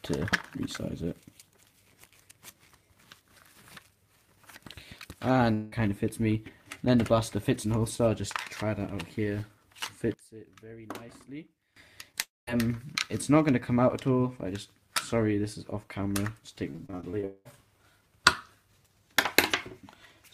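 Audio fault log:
5.53–5.74 s, 12.21–12.49 s and 17.25–17.47 s, long network dropout: The sound freezes into a fading buzz. It then resumes further on. About 180 ms, 260 ms and 200 ms are lost. The second gap ends in about 190 ms of silence. A likely cause is network audio that stopped arriving.
10.14–11.76 s, one channel inverted: The level drops by about 19 dB, leaving a faint residue. Centred content cancels out. This likely comes from one channel flipping polarity, so the shared signal subtracts when the channels are summed.
12.12–12.15 s, short concealed packet loss: About 20 ms is missing. It is patched by extending the preceding sound. It is heard as a brief smear just before the next dropout.
16.71–17.25 s, repeated packet loss (robotic sound): There are eight short holes, the longest 31 ms. About a third of this stretch is patched guesswork. The repeated patching gives a choppy texture that runs straight into the dropout at 17.25 s.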